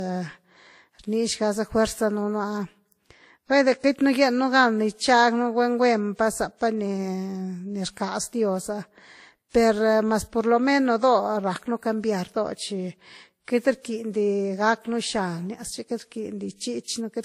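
Throughout, the speech was likely transcoded between lossy codecs, WMA then Vorbis, so two layers of coding artefacts are heard together, with nothing above 15.2 kHz.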